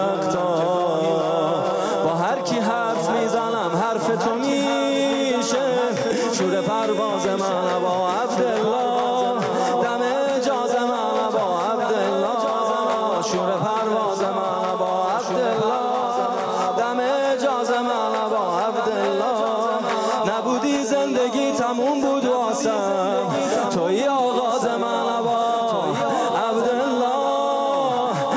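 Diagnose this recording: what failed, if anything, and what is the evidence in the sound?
A doubled audio track runs throughout: a second, full-band copy trails the original by about two seconds at about 5 dB lower. It has no decay or room colouring, which rules out acoustic echo or reverb. The likely cause is a slower second capture path or an edit holding two offset copies.

Gain pumping also runs throughout. The gain swings by about 5 dB, ducking under each loud sound and squashing loud and soft passages together. This likely comes from excessive input gain driving a fast limiter.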